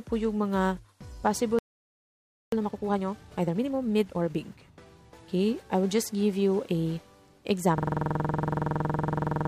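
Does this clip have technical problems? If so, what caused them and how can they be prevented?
Yes. From 1.59 to 2.52 s a playback stall occurs, most likely because the player ran out of buffered data or its thread was blocked. The sound cuts to silence for about 0.94 s before resuming. A deeper playback buffer and a player thread that other work cannot starve would prevent this.

From 2.52 to 4.38 s the player catches up with time-compressed playback, trimming its backlog by removing short pieces and cross-fading the joins. The sound runs at 1.5 times normal speed without a pitch change. Rejoining live audio at the current point instead of compressing the backlog would avoid this.

From 7.78 s to the end there is a system hang loop: the computer or driver froze while the audio hardware kept cycling through one ring buffer. A 46 ms slice repeats exactly, producing a buzzing stutter at 21.5 Hz that fits a 2048-sample buffer. 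A watchdog that mutes output when the driver stops refilling the buffer would prevent it.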